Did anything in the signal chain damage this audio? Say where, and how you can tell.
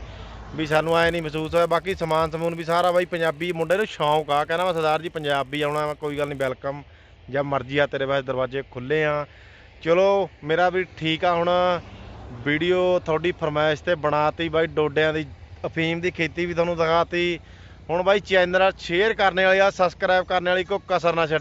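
Yes. The sample-rate conversion stage, going from 16 kHz to 48 kHz, restarted its resampler on every 10 ms block between 0.65 and 6.49 s. Each block edge lacked real neighbouring samples, leaving a small error there, heard as a 100 Hz buzz riding on the signal.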